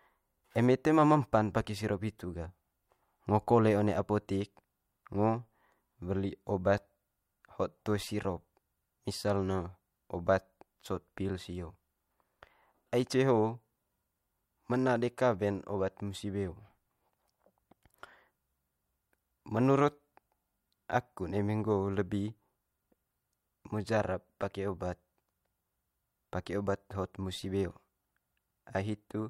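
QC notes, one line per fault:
Nothing stood out on listening to the speech.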